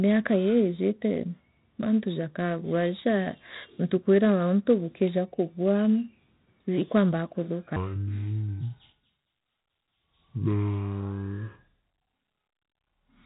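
4-bit ADPCM compression runs through the whole clip. Each sample is coded as a coarse step from a prediction, so a heavy, gritty hiss rides on every loud stretch of speech, attacks distort, and nothing remains above 3.8 kHz. This fits a 32 kbps stream.

Section at the wrong speed from 7.76 s to the end. The speech slows to 0.597 times its proper rate and drops about ten semitones, sounding deep and dragging. The likely cause is this part being played back against the wrong clock.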